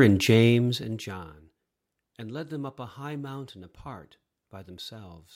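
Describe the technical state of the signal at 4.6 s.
At 4.6 s the speech signal is intact, with no fault present at that moment.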